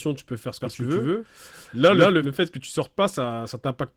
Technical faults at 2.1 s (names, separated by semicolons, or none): Opus voice compression; doubled audio track